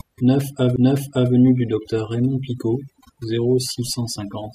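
Overdone noise removal runs through the whole of this speech recording. A noise reduction process set far too aggressively has pulled individual frequency bands down or out wherever they came close to its idea of the noise floor, and the quieter parts of the voice were taken along with them. The gaps between phrases sink to near silence scattered with twinkling specks. A CD skip occurs at 0.76 s, where a knock or disc flaw made the laser jump to a different turn of the spiral. Playback mutes for only a few milliseconds, which is heard as a tick, and then carries on from another point in the recording, so the speech lurches suddenly instead of continuing where it left off.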